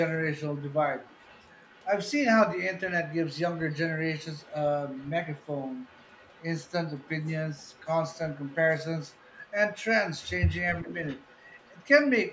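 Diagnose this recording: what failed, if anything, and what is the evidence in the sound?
A faint copy of the speech trails about 0.40 s behind, from 0.38 to 1.86 s and from 3.08 s to the end: echo leak, likely from incomplete echo cancellation in call processing.

At 10.82 to 10.91 s the speech dips by about 10 dB: speech suppressed in double talk, the canceller likely turning down its own talker along with the loudspeaker echo during overlapping speech.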